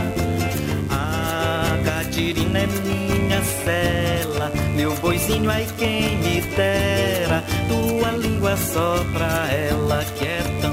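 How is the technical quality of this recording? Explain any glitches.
The technical quality is compromised by a single persistent fault: mains buzz runs through the entire recording. Sharp switching spikes from a dimmer, rectifier or poorly shielded line enter the signal twice per 50 Hz cycle, producing a steady, raspy buzz at roughly 25 dB below the wanted sound. On a spectrogram it shows as a ladder of evenly spaced horizontal lines at multiples of 50 Hz, climbing into the kilohertz range; the waveform carries a fine, regular spiky ripple underneath.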